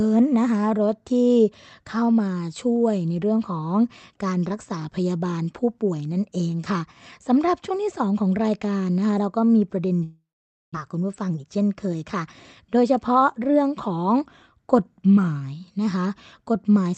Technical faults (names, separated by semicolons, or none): long network dropout; jitter buffer speed-up